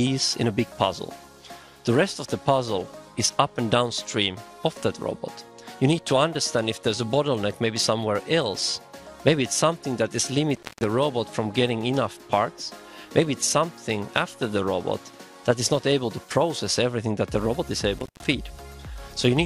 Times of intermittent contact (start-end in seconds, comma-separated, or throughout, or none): 10.55-10.84, 17.98-18.28